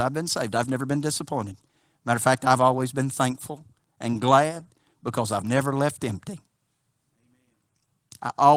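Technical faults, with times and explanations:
No technical faults can be heard anywhere in the speech. There is nothing to time or explain.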